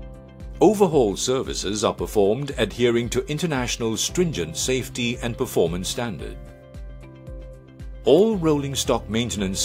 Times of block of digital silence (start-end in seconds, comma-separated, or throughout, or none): none